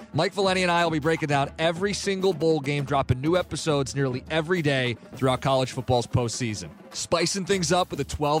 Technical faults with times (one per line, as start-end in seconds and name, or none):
2.32-3.37 GSM signalling bursts